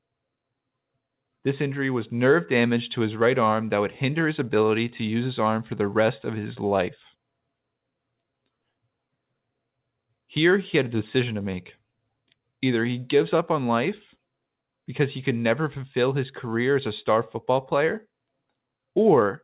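No technical faults can be heard in this speech; the audio, carried over a narrowband call path with nothing above 4 kHz, contains nothing to describe in time order.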